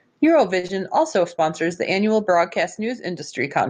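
At 0.59 s, just before "also sponsors the annual", there is a short stall from a late packet. A packet arrived after its playout time, and the jitter buffer ran dry. The receiver held the last sound for about 39 ms while it waited, then resumed from the same point. Nothing is lost. The delay grows by 39 ms, and the sound lingers with a slight buzz or dip until about 0.74 s.

Inside that stretch, from 0.67 to 0.71 s, comes a short concealed packet loss. About 20 ms of audio never reached the decoder in time. The receiver covered the gap by extending the preceding sound for roughly 19 ms, then blended back into the real signal. It is heard as a brief smear or wobble, still just ahead of "also sponsors the annual".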